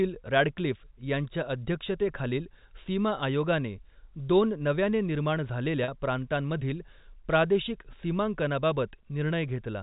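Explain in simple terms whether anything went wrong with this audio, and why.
At about 5.84 s the speech briefly sticks on a slightly held, buzzy sound for roughly 40 ms. That is packet loss with pitch repetition: a short stretch of audio, about two packets' worth, never arrived, so the receiver filled the gap by repeating the last bit of voice.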